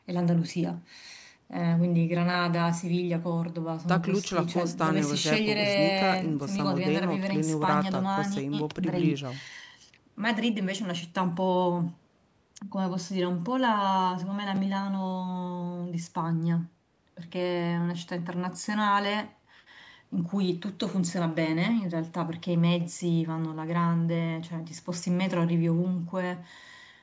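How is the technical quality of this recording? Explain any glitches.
No glitches; the speech recording is technically sound.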